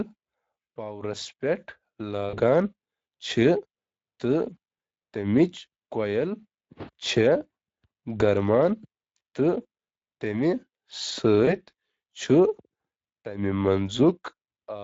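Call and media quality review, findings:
Speex codec, whole clip: speech is noticeably hoarse and grainy, with a noisy edge on every stretch. The excitation is starved of bits, so the CELP coder can't rebuild clean pitch pulses. The damage level points to a mid-quality Speex setting of around 20 kbps.

VoIP packet loss concealed by the speech codec, at 2.29–2.38 s and 11.45–11.56 s: the speech smears into a fading buzz or coloured noise, and the sound stays weak briefly after each gap. The decoder extrapolated the last pitch and filter with decaying gain. The gaps fit roughly 40 ms and 20 ms of lost packets.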